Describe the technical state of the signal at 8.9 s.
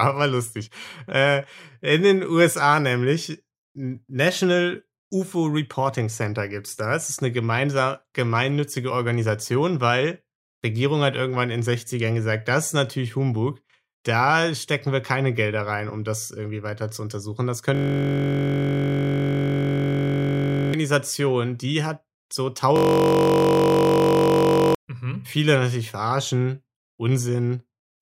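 At 8.9 s the signal is intact, with no audible fault at that point in the speech.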